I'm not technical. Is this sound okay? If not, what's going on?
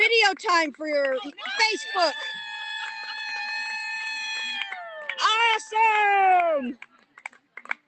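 No. You can hear sound cut by the noise suppressor twice: from 4.82 to 5.12 s, and from 6.77 s to the end. It mistook the sound for noise and turned it down.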